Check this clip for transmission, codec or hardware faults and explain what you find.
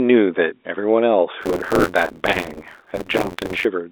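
One hardware fault is present: buffer tearing. It runs from 1.41 to 3.66 s. The writer and the reader of the playback ring buffer have slipped and cross inside every period. Roughly a third of each buffer repeats audio about 40 ms old, with hard joins. The result is a robotic 86.1 Hz buzz through the speech, which fits a 512-sample buffer. The telephone band of about 300 Hz to 3.7 kHz comes from the G.711 line coding.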